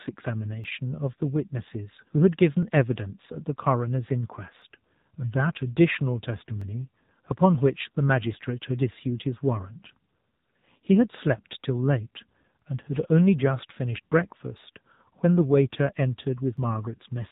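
Throughout, the speech carries AMR narrowband mobile codec damage: nothing passes above 3.8 kHz, and the plainly buzzy, synthetic tone fits a low rate near 7.4 kbps. From 0.64 s to 16.57 s, about ten regular clicks recur every 1.99 s, likely clock drift buffer slips: a clock mismatch near 500 ppm dropping or repeating roughly 50 samples each time.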